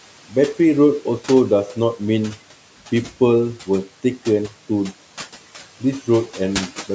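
Throughout, noise suppressor artifacts: the suppressor cuts room noise by about 12 dB between phrases, so the background drops in pauses and returns under speech.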